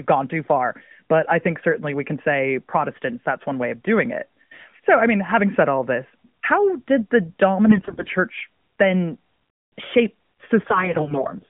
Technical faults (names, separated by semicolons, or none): AMR bit errors